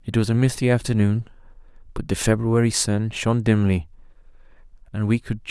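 No technical faults can be heard anywhere in the recording. Nothing in the speech calls for a timestamp or a comment on the signal chain.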